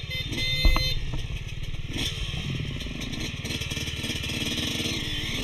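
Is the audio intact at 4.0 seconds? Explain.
No. Channel delay (comb filtering) runs throughout, including 4.0 s: one channel lags by roughly a third of a millisecond, so summing cuts evenly spaced notches from around 1.5 kHz, sounding hollow and phasey.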